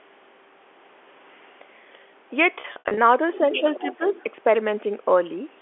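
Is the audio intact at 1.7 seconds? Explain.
Yes, at 1.7 seconds the speech is intact, with nothing beyond the normal narrow band of telephone coding and the call microphone's usual processing.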